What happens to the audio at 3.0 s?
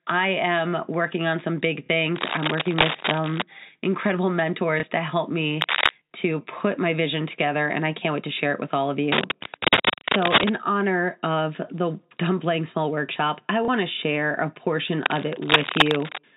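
A worn cable or connector is likely being moved, its contact resistance jumping rapidly, so cable scratch noise rasps over the speech from 2.16 to 3.42 s, louder than the voice itself.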